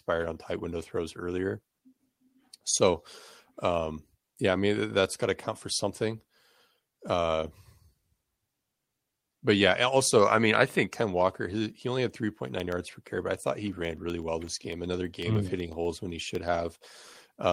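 From 12.35 s to 17.36 s the speech carries periodic USB or driver dropouts: a regular tick every 0.125 s, eight per second, about forty in all. Each tick is a gap of a fraction of a millisecond where the signal drops to silence, which points to a background task stalling the USB bus or audio driver on a fixed schedule. The ticks sound only while the voice is present.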